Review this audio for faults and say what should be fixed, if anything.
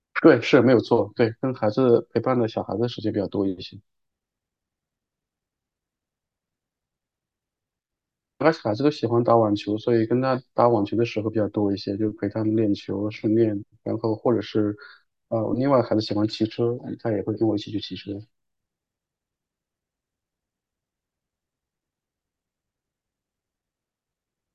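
No faults found; nothing needs fixing.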